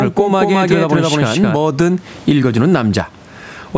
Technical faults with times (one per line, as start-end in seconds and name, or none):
0.00-3.77 gain pumping
0.00-1.56 doubled audio track